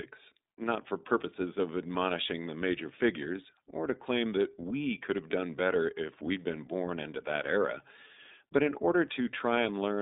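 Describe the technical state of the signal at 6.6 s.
At 6.6 s the speech is passing through the iLBC codec, as it does for the whole clip. The coder rebuilds each frame's excitation independently of the frame before, in short blocks consistent with its 30 ms frame mode at 13.33 kbps, over a line band of 200 Hz to 3.7 kHz. The result is plainly audible codec damage: muffled, bass-thin narrowband speech with a rough, slightly synthetic texture.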